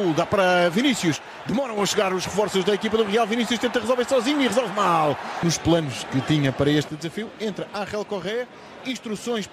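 A sudden gain jump at 1.16 s drops the level by about 6 dB in a single step, and it stays down until 1.77 s, when it snaps back up. A second one at 6.89 s cuts the level by about 8 dB and holds to the end. The background noise moves with the wanted sound each time, likely because a digital gain setting was applied without any ramp.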